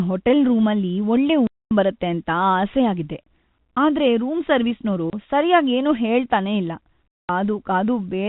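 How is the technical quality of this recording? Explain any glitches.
The speech is chopped by three silent gaps, heard through narrowband G.711 telephone coding. The sound cuts off above 4 kHz and carries at most a faint hiss.

Packet loss filled with silence occurs at 1.47 to 1.71 s (240 ms, after "ರೂಮಲ್ಲಿ ಒಳ್ಳೆ"), 5.10 to 5.13 s (30 ms, before "ಸರ್ಯಾಗ್ ಏನೂ ಹೇಳ್ತನೇ ಇಲ್ಲ") and 7.18 to 7.29 s (after "ಸರ್ಯಾಗ್ ಏನೂ ಹೇಳ್ತನೇ ಇಲ್ಲ"). Lost packets were replaced with silence, and the gap lengths fit a 30 ms packet size. Each dropout has abrupt edges.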